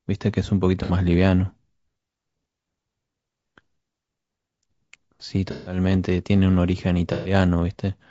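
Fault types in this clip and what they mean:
Low-delay AAC compression: rough, grainy speech with noise between harmonics and a thin synthetic top band, likely short-frame AAC-ELD, consistent with roughly 32 kbps.
AAC frame loss with concealment: missing frames patched from the previous spectrum, heard as smeared, noisy patches at 0.83, 5.51 and 7.13 s, the later two longest.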